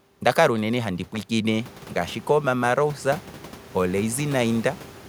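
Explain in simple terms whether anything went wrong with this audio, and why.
Nothing went wrong with this speech recording; the background noise that grows louder at around a second and a half is ordinary noise from the room the microphone was in, and it stays well beneath the talking.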